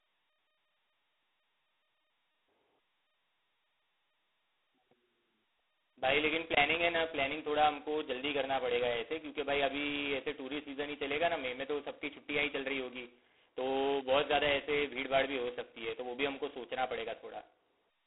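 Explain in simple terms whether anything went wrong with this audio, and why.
The speech went through G.726 ADPCM, a telephone coding method that records only the small change from one moment to the next, guessed ahead of time. Here it ran at its lowest setting, with very few bits for each change, so each change is stored only roughly. From start to finish this leaves a harsh, rasping hiss that rises and falls with the speech, and a thin, muffled phone sound with nothing above about 3.9 kHz.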